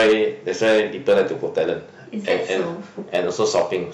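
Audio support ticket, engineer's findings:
Hard clipping on speech peaks. Harsh crackle and fuzz at 0.00–0.22 s, 0.62–1.22 s, 3.15–3.75 s (overdriven by about 7, 6 and 6 dB). Lighter crackle at 1.58–1.69 s, about 3 dB over. Probable component: an input gain stage or converter run too hot. Peaks exceed what the stage can pass and are cut flat. The flat tops add high harmonics, heard as distortion on loud syllables.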